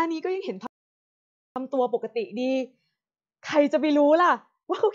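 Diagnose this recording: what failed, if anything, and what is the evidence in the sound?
Playback stage: a playback stall cuts the speech to silence from 0.67 to 1.56 s, likely from player data starvation; too long for a dropout.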